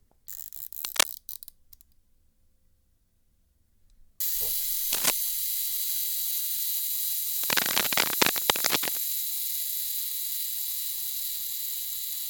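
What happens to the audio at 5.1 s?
A burst of dense, uneven crackling and rustling sits over the sound from about 4.93 to 5.12 s, so at 5.1 s you are hearing the tail end of it, roughly a few decibels louder than the underlying audio. This is cable scratch noise, likely from a worn cable, connector or control being moved, its contact resistance jumping rapidly and briefly adding ragged bursts of noise to the signal for those two-tenths of a second.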